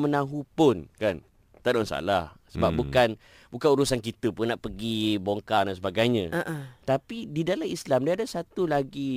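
From 0.78 to 2.35 s the speech slows by about 6.2% and drops about 111 cents, roughly a semitone. Then it snaps back. This is likely a drift correction step, where clock-matching software briefly shifts the playback rate to rebalance its buffer. From 4.39 to 5.57 s, after "bukan bukan urusan kita", the opposite happens. Speed rises 6.2% and pitch climbs about 104 cents. Normal rate returns before "dan sebagainya".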